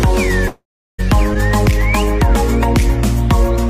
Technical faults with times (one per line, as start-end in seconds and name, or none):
0.47-1.00 long network dropout